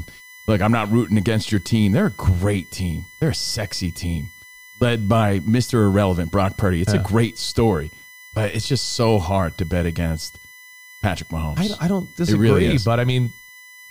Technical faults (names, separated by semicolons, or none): USB whine